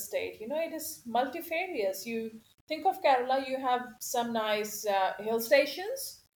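It's a short speech recording with a grainy, gritty distortion that rides along with the voice from start to finish, sitting roughly 35 dB under the signal and getting rougher as the level drops. The likely cause is low bit depth without dither. The sound fits something like a 9-bit signal that was simply rounded, so the error follows the waveform instead of behaving as a steady hiss, and quiet stretches break up most noticeably.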